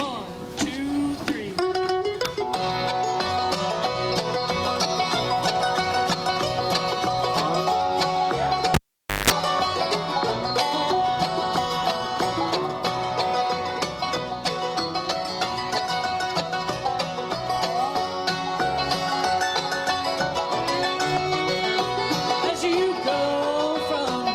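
At 8.74 s the cable is pulled and plugged in while live. A pop marks the break, and the sound drops to near silence for about 0.51 s as the connection is lost. During the reconnection, 0.18 s of 50 Hz mains buzz leaks in while only the plug tip makes contact, picking up hum before the ground connects. A second pop follows as full contact returns and the sound resumes at 9.30 s.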